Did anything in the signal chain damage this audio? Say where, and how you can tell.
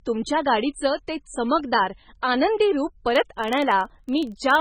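Yes. The codec stage left its mark across the whole clip. The speech sounds watery and swirly. Weak components flicker in and out between frames. This is likely MP3 compression, with heavy damage that fits a very low bitrate near 16 kbps.

A processing stage, probably a filter in the buffer path, is restarted on every block from 3.07 s to the end. Each block starts from silence, so a small transient ticks in at 21.5 Hz. That rate fits 2048-sample blocks. The buzz rises and falls with the speech level.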